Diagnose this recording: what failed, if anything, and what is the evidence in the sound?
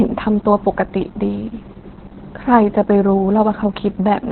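The codec stage failed: the speech went through Opus voice compression at a very low rate, around 8 kbps, in SILK narrowband mode. Throughout, nothing survives above 4.2 kHz, so the voice sounds muffled, while coarse excitation coding leaves it hoarse and slightly robotic.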